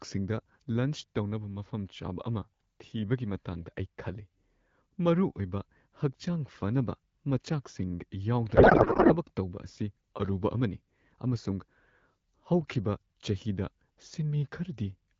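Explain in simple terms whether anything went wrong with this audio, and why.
Codec payload misread, 8.55 to 9.15 s: the receiver unpacked the speech data in the wrong layout, so for that moment the speech turns into garbled, warbling noise.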